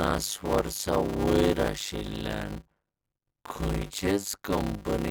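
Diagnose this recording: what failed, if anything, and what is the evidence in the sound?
At the driver or buffer stage, a block size mismatch (padded) runs throughout. The speech plays at 0.533 times normal speed at about normal pitch, under a 100 Hz buzz, which fits 256-sample blocks zero-filled into longer reads. Waveform: flat gaps every 10 ms. Spectrogram: regular vertical stripes.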